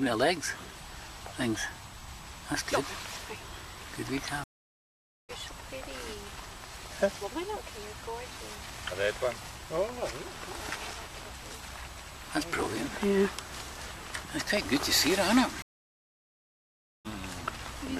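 Two stream reconnects break up this audio. At 4.44 s it drops out for about 0.85 s and comes back around 5.31 s, roughly half a second further along than where it left off. At 15.62 s it happens again, with a longer gap of about 1.43 s before resuming near 17.06 s and skipping about a second. Each time the connection fell over, the player went quiet, reconnected and spun up a fresh decoder on a live feed that had kept moving, so the missed stretch is simply gone.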